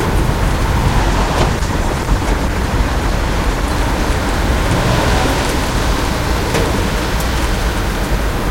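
A recording of sounds turns rough and muffled from 1.0 s to 3.77 s, losing its top end before clearing again. That is a call bitrate drop: the encoder was squeezed to far fewer bits, which fits a fall from about 96 kbps to 14 kbps.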